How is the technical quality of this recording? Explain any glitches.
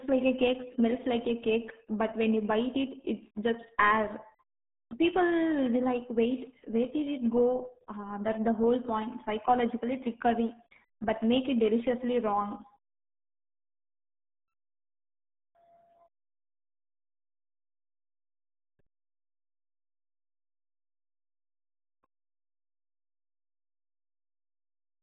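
Poor: the whole recording has passed through a very low-rate speech codec.

RealAudio 14.4 codec, present from start to finish: the speech is confined to roughly 150 Hz to 3.7 kHz, with nothing at all above 3.8 kHz, so sibilants and consonant detail are gone and the voice sounds muffled. Heavy coding damage adds a gargling, watery texture to the speech. The codec models speech coarsely to fit a dial-up modem link, and the loss of detail fits an 8 kbit/s bitrate.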